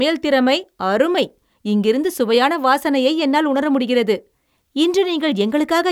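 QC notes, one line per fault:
No faults found.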